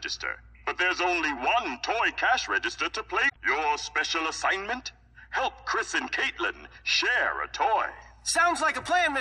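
At 3.25 s a short, harsh blip cuts into the sound and lasts about a tenth of a second, ending at 3.36 s. The sound there breaks up briefly before the clip carries on. The cause is damaged data in a compressed stream: a stretch of the encoded bytes was lost or corrupted, so the decoder misread those frames, lost its place, and had to search forward for the next valid frame header before it could resume.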